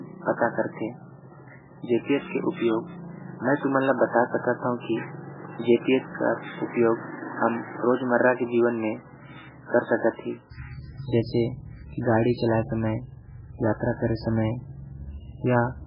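From the first second to the end, the speech shows heavy codec damage, likely from MP3 compression. Nothing is heard above 5.2 kHz. The sound is watery and swirly. Weak detail flickers in and out from frame to frame, and attacks smear. The encoder was starved of bits, so it dropped quiet frequency lines and cut the treble. The damage fits a very low bitrate, around 8 kbps.

From 0.0 to 10.51 s, the band is narrower still, with nothing above 3.8 kHz. This is likely an input switched to a poorer device. The speech sounds duller and boxier here. A quiet new background noise sits far below the speech, roughly 45 dB down. At 10.51 s there is a short gap of about 20 ms. After it, the sound opens up to the wider band. The level stays about the same across the switch.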